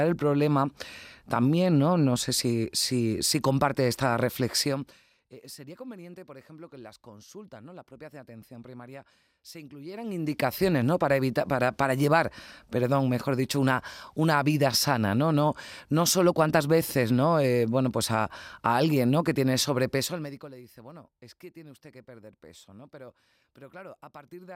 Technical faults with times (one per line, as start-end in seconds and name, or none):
4.62-5.06 zipper noise
9.80-10.46 zipper noise
19.94-20.54 zipper noise